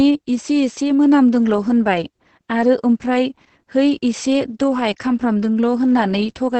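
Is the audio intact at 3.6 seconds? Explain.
No. Across the whole clip, including 3.6 s, the speech has Opus voice compression. Its SILK coder, in wideband mode, quantises the excitation very coarsely, consistent with roughly 10 kbps. Nothing survives above 8.6 kHz, so the voice sounds muffled, hoarse and slightly robotic.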